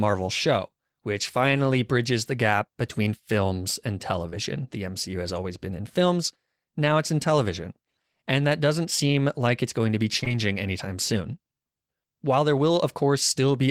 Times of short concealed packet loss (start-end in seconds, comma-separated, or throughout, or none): 4.29-4.34, 10.20-10.32